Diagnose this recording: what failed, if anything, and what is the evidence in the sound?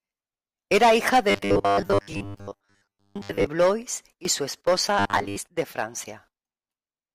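Robotic sound from repeated short buffers at the driver or buffer stage, 1.31–3.47 s and 4.99–5.36 s after "y su esposa": a rigid 100 Hz buzz, likely from a 10 ms block replayed over most of the speech.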